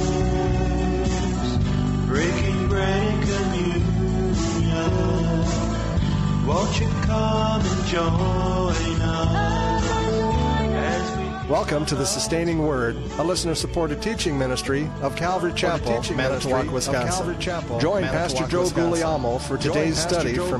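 A second, slower capture path was likely mixed in alongside the main one, producing a doubled audio track from 15.64 s to the end. A full-band copy trails about two seconds behind, roughly 5 dB quieter, starting abruptly and carrying no decay or room colour.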